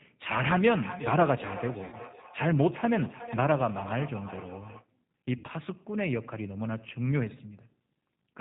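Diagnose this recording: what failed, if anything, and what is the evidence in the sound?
The codec stage is at fault. The whole recording carries G.729 coding damage that is plainly audible: the speech sounds slightly rough and synthetic, as a low-rate encoder rebuilds it from a vocal-tract filter, a pitch predictor and a few pulses per subframe, which fits 8 kbit/s G.729A. On a spectrogram, energy stops abruptly at 4 kHz, and harmonics look smeared and grainy rather than cleanly striated.

The network stage is also at fault. There are two dropouts hidden by VoIP packet loss concealed by the speech codec, from 1.84 to 1.97 s (about 80 ms missing, which fits four 20 ms packets) and from 5.38 to 5.47 s (about 60 ms, three packets). The decoder extended its last pitch and filter with falling gain, so each gap is stretched into a buzzy tone or coloured noise that fades. Waveforms show a repetitive, decaying periodic stretch, and spectrograms show frozen horizontal harmonics, with weak recovery afterwards.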